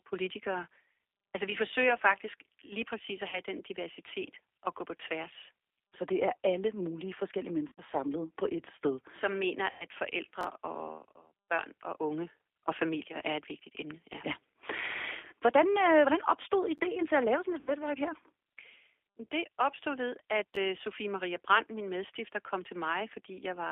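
Danish speech heard through a G.729 codec for its full length. The sound is rough and slightly synthetic. It is confined to a phone band of 300 Hz to 3.5 kHz, which fits an 8 kbit/s model-based coder rebuilding each 10 ms frame from a filter and a few pulses. VoIP packet loss concealed by the speech codec occurs four times: 3.29 to 3.40 s, 7.68 to 7.81 s between "er alle mulige forskellige" and "samlet på et sted", 9.70 to 9.85 s, and 17.60 to 17.75 s after "at lave sådan et". The decoder stretches the last sound into a fading buzz or coloured noise. It covers 40, 90, 100 and 70 ms of missing audio, and the voice stays weak briefly afterwards. Chunks out of order occur at 10.41 to 10.44 s, 16.78 to 16.80 s, and 20.54 to 20.57 s after "opstod ved at". An audio chunk of about 11 ms plays one or two chunks late. The result is a short jumbled moment with hard joins.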